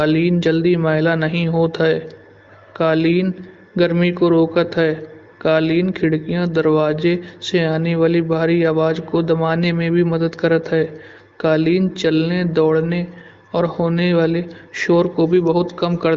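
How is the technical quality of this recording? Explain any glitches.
No glitches are audible; the speech runs through an AMR wideband (HD Voice) codec with nothing above about 7.6 kHz, consistent with one of its higher rates.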